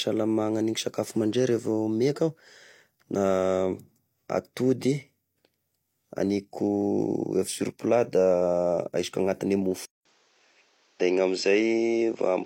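At 9.85 s, after a flat 200 ms waveform gap, speech turns duller, likely an input switched to a poorer device; spectrogram empty above 7.6 kHz.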